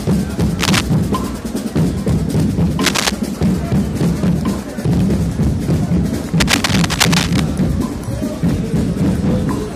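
Three bursts of cable scratch noise cut across the audio, from 0.59 to 0.81 s, 2.81 to 3.13 s, and a longer stretch from 6.39 to 7.40 s, each roughly as loud as the sound itself. They are dense, irregular rasps, likely from a worn cable, connector or control being moved. That sets them apart from isolated clicks or steady crackle: they arrive in short, shapeless clusters.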